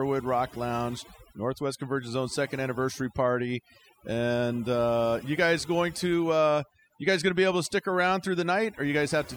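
From start to finish the speech carries overdone noise removal. The noise reducer was pushed too hard, so bands near its noise estimate get slammed shut, taking quiet bits of the voice too. The gaps go near-silent with twinkly specks.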